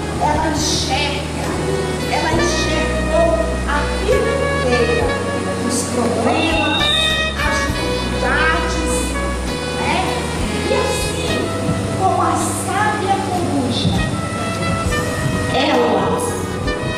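No technical faults can be heard anywhere in this audio.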